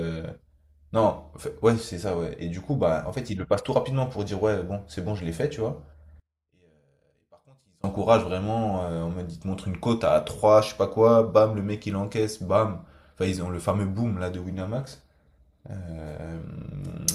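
One channel was likely inverted in polarity from 6.20 to 7.84 s, so the content common to both channels cancels when they are summed to mono. The speech drops by about 33 dB, leaving only a faint residue of whatever differs between the channels.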